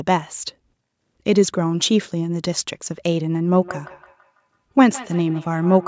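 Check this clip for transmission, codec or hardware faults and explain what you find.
One fault is present, in the final stretch of the speech, where the call's microphone processing has kept the band below 8 kHz. Feedback echo between two devices runs from 3.56 s to the end at 5.88 s. A second device in the room replays this microphone's signal, which the microphone picks up again, and no canceller removes it. The speech returns about every 150 ms as a thin, ringing repeat at most about 18 dB below the speech.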